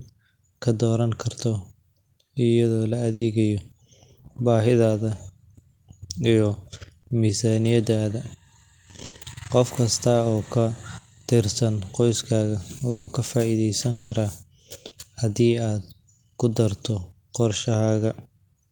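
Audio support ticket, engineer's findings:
Burst of packet loss, 3.13–3.23 s and 9.05–9.15 s: consecutive packets dropped; receiver extends the last speech sound about 80 ms as a fading buzz or hiss, then skips ahead.

Short concealed packet loss, 7.01–7.05 s and 14.87–14.93 s, just before "haddii aad ku darto": packets late to decoder; concealment fills 20 ms and 40 ms, heard as a brief smear or wobble.

Long network dropout, 12.89–13.09 s after "tirsan qoyskaaga" and 13.91–14.13 s: likely a stalled network path; last sound stretched 180 ms and 200 ms, fading without reaching silence, and speech resumes with those spans missing.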